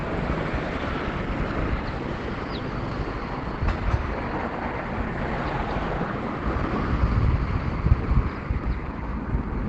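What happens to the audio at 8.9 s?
At 8.9 s the audio carries the same Opus compression damage heard across the whole clip. The sound is muffled and hoarse, with its top end cut off around 8 kHz and plainly audible codec damage. That points to a low bitrate, likely around 16 kbps, where the encoder has dropped into its speech-oriented SILK mode. That mode models the signal coarsely and cannot reproduce the original's full detail or bandwidth.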